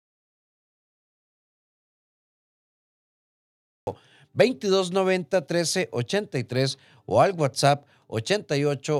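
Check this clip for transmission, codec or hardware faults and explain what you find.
One fault is present. An audio dropout to silence runs from the start to 3.87 s, likely lost input while the recorder kept writing silence. It is dead silence with no room tone, a flat line on the waveform and a blank spectrogram, before the speech cuts in abruptly.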